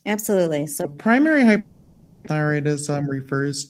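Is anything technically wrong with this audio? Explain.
Yes. From 0.85 s to the end, the speech plays at 0.81 times normal speed and about 4 semitones lower, so it sounds deep and drawn out. This is likely a section at the wrong speed, clocked incorrectly. A spectrogram shows harmonics shifted downward and stretched in time.

From 1.59 to 2.28 s, a fading continuation of the last sound fills about 670 ms, and roughly 600 ms of audio never returns. This is likely a long network dropout with receiver concealment. It shows as smeared, repeating, fading harmonic bands, and afterwards the timing sits around 50 ms later.

From 2.90 to 3.41 s, a jitter buffer speed-up trims pitch-period slices, about 50 ms in total, making the speech run 108% fast at unchanged pitch. The waveform shows whole pitch cycles cut out, with the remaining cycles unchanged in length.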